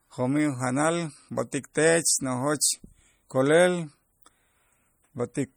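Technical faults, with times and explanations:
throughout: low-bitrate audio saved at a high bitrate. The speech was likely compressed by a low-rate MP3 pass, which fits about 48 kbit/s, then re-saved as MP3 near 253 kbit/s. The larger file cannot restore what the first pass discarded, so its artefacts remain, with nothing above 20.1 kHz.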